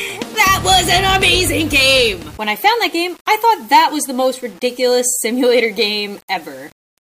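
Grainy distortion tracks the sound throughout, quiet parts turning gritty with error roughly 30 dB down. The likely cause is low bit depth without dither, fitting 7-bit rounding.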